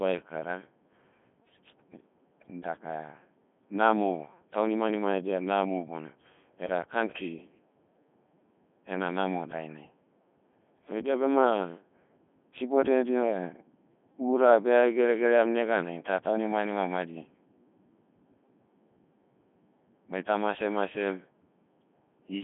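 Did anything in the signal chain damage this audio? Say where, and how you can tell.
Yes, at the codec stage: the whole clip went through a Codec 2 vocoder. The speech sounds robotic and buzzy, with nothing above 3.6 kHz. The decoder rebuilt it from sine waves using only pitch, voicing, energy and a spectral envelope, which fits the 3.2 kbit/s mode.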